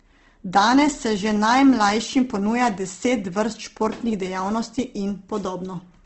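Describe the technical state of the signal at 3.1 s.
At 3.1 s the speech carries Opus compression, which runs through the whole clip. Nothing reaches above 8.2 kHz, and starved bands are filled with folded or noise-like energy. The result is plainly grainy and rough rather than MP3-style swirling, likely from CELT mode at around 16 kbps.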